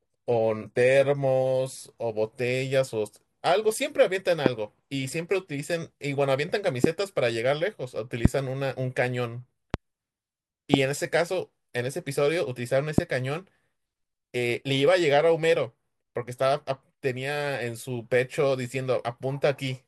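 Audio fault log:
0.00–2.00 s, adaptive stream starting at a low bitrate: the player opened on a thin, fits-20 kbit/s HE-AAC version, giving synthetic treble and smeary speech, then jumped cleanly to fuller AAC-LC quality near 96 kbit/s.
4.46–4.48, 6.84–6.87, 8.25–8.28, 9.74–9.76, 10.74–10.76, 12.98–13.01 s, loud pop: likely voltage spikes from a plug, switch or static, each a single sharp pop about 20 dB above the speech (the 9.74 s one nearer 15 dB), speech continuing underneath.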